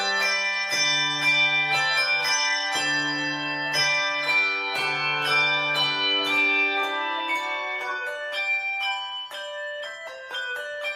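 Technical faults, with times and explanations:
Nothing stood out as a technical problem on listening to this audio.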